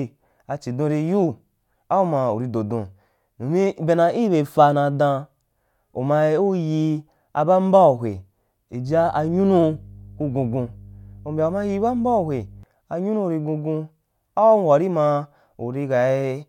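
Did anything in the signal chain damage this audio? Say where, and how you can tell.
Yes. Mains hum enters in the analogue wiring from 8.87 s to 12.63 s as a steady 50 Hz tone under the speech, roughly 20 dB below it. A ground loop or nearby transformer is coupling the power line into the signal path. On a spectrogram this shows as a thin horizontal line at 50 Hz that starts and stops abruptly at those times. The waveform carries a regular 20 ms ripple through the pauses.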